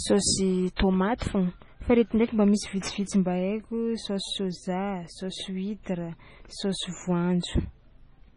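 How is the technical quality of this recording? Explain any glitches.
Technical quality is poor: heavy codec damage runs through the whole speech recording, and two attacks are smeared by pre-echo.

Throughout, nothing exists above 10.5 kHz, and the sound is watery, likely from heavy MP3 compression at a bitrate near 24 kbps. A spectrogram shows a hard ceiling with flickering, patchy holes.

At 0.76 to 0.79 s and 1.18 to 1.21 s, pre-echo puts about 30 ms of hiss before each attack, as block-wide quantisation noise fills the quiet gap. The waveform shows fuzz just ahead of each onset.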